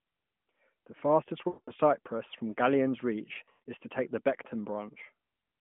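At 1.48 to 1.71 s the speech stretches into a frozen, droning tail that fades toward silence, then returns weak and rough. From 3.34 to 3.68 s it stutters and warbles through several shorter dropouts. These are lost AMR speech frames: the narrowband decoder patched missing blocks by repeating its last good pitch and vocal-tract settings at falling gain. About 200 ms went in one run first, fitting ten 20 ms frames. The second loss totalled about 180 ms, the longest run 120 ms.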